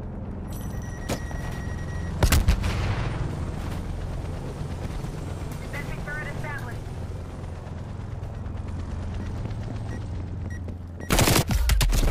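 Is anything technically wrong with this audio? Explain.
No, nothing technically wrong turns up here; it's a perfectly sound recording with nothing to flag.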